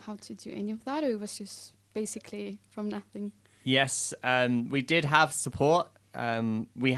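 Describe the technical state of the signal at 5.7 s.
At 5.7 s the speech comes through intact, with no dropout, glitch or other fault, only the ordinary character of a call codec path whose audio tops out around 12 kHz.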